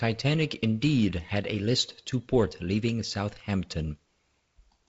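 No technical faults are audible.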